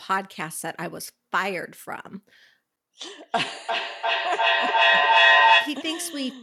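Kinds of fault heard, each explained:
Feedback echo between two devices: one device replays the call into another's mic, so from 3.05 s repeats return roughly every 0.4 s, piling up to about 10 dB over the speech.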